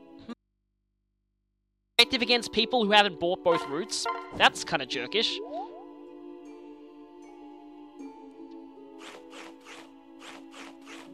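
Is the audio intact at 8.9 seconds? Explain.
Yes, the audio at 8.9 seconds is intact, with no dropout, glitch, distortion or other fault at that moment.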